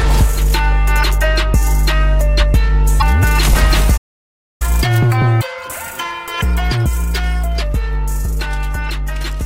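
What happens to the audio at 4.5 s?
At 4.5 s the sound has gone silent mid-flow, in a 0.63 s gap from 3.97 to 4.62 s: a playback stall, likely the player running out of data or being blocked.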